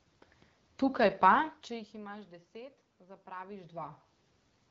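Nothing in this speech recording stood out as a technical fault on listening.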